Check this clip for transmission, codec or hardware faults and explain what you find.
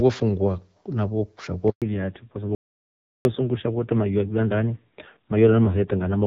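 Three faults are audible in this speech clip, all starting near the 2-second mark.

Handover gap, 1.70 to 1.82 s: the call was passed from one network to another, and no speech frames got through during the switch. The speech fades out quickly and leaves 120 ms of silence before the new link picks up, so that stretch is lost.

Fallback to narrowband, 1.82 s to the end: after the handover the call left HD Voice, where the wideband AMR-WB path sounds clear with only light coding damage, and dropped to an older narrowband codec. Nothing above 4 kHz survives, and the harshness points to a low rate such as AMR-NB at 5.9 kbit/s. The speech turns dull, boxy and gritty.

Audio dropout to silence, 2.55 to 3.25 s: the sound cuts off abruptly mid-flow for about 700 ms and comes back just as suddenly. The gap is silent with no room tone at all, which points to the input likely having been lost and silence being written in its place. 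Whatever was said there is gone.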